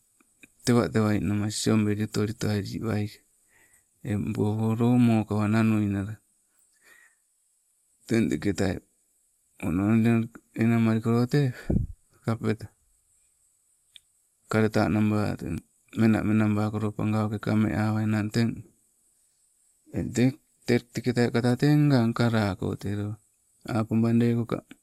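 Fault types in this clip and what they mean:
No faults are audible anywhere in this speech recording.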